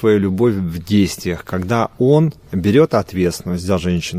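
No technical faults can be heard anywhere in the audio; the signal stays continuous and intact throughout.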